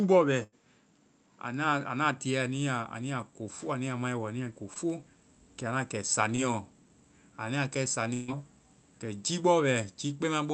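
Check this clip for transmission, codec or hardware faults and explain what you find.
Three kinds of fault turn up in this speech, carried over a call path whose Opus coding, with a band ending near 8 kHz, fits about 32 kbps.

Input switched to a poorer device, 0 to 2.17 s: nothing sounds above 7.6 kHz and there is new noise about 45 dB down, likely from a narrower-band microphone, with no level jump or gap.

Burst of packet loss, 0.43 to 0.54 s and 8.14 to 8.30 s: lost packets were filled by extending and fading the last sound, about 86 ms and 138 ms, skipping roughly 80 ms and 140 ms.

Short concealed packet loss, 4.74 to 4.77 s and 6.35 to 6.40 s: about 20 ms went missing each time, patched by continuing the previous sound, leaving a brief smear.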